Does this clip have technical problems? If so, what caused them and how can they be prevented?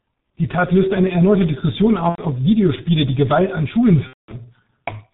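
Yes. G.723.1 codec compression runs through the whole speech clip. The sound is muffled, with nothing above 4 kHz, and has a hoarse, rough texture with smeared consonants. The damage is heavy and fits the 6.3 kbit/s mode. The codec models the voice with a coarse filter refreshed only every 30 ms frame, so fast changes in the sound are averaged away. To prevent this, use a wideband codec such as Opus at a higher bitrate.

VoIP packet loss concealed by the speech codec occurs at 2.09–2.21 s and 4.07–4.33 s. In both gaps the decoder keeps repeating its last pitch and spectral shape at falling gain, so the sound turns into a fading tone or noise and then mutes from the third lost frame. The first gap fits roughly three lost 30 ms frames and the second about seven. To prevent this, use a jitter buffer and forward error correction, and prioritise voice traffic on the network.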